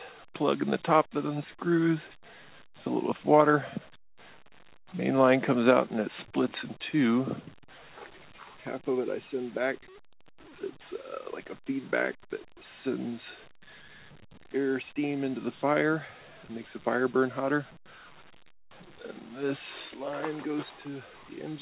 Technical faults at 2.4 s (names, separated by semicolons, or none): sound cut by the noise suppressor